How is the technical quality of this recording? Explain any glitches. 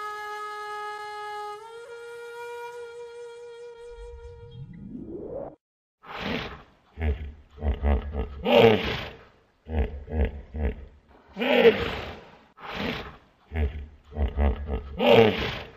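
The recording has one fault running throughout: sample clock jitter. An unstable converter clock, wandering by under a microsecond, mistimes samples, adding faint roughness about 50 dB down that rises on loud, bright passages.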